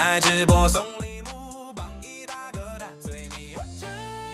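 The audio carries zipper noise from 0.68 to 1.08 s. A level drop of roughly 20 dB is applied in unsmoothed 2 dB steps, around twenty per second. Each abrupt gain jump leaves a small click, and together they form a ticking zip over the sound as it fades.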